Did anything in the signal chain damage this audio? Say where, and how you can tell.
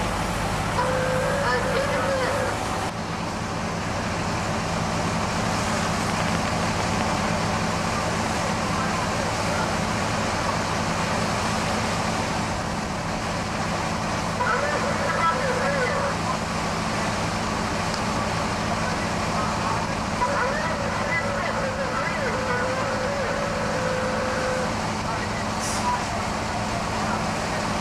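Yes, there's a train of clicks from 6.10 to 7.02 s: about ten similar pops at roughly 10 per second, unevenly spaced, sitting about 20 dB above the sound. That points to an outside pulse source, likely interference getting into the analogue wiring or a faulty connection or power supply.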